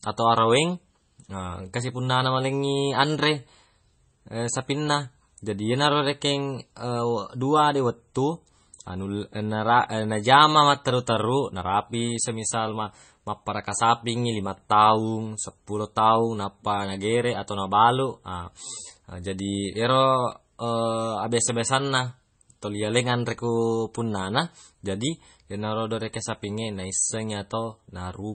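MP3 compression artefacts run throughout the speech, likely from a low-bitrate encode, which fits roughly 24 kbps. Nothing remains above 8.3 kHz, and weak frequency lines drop in and out between frames, giving heavy watery swirling, metallic chirps on s sounds and smeared attacks.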